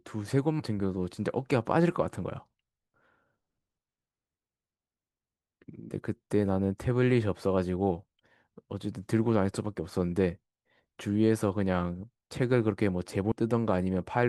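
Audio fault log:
0.59 s and 13.31–13.35 s, compressed frames skipped: the speech jumps ahead by roughly a tenth of a second, which fits several 20 ms frames going missing.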